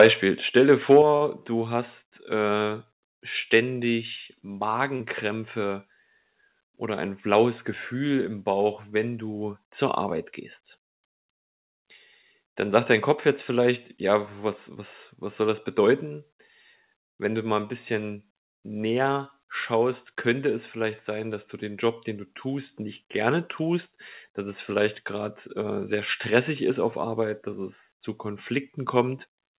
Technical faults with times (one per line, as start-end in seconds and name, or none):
0.00-0.07 microphone overload
0.02 microphone volume stepped down
0.90-0.99 microphone overload
1.02 microphone volume stepped down
1.17-1.22 short stall from a late packet
4.96-5.01 short concealed packet loss
13.58-14.09 jitter buffer speed-up
16.06 microphone volume stepped down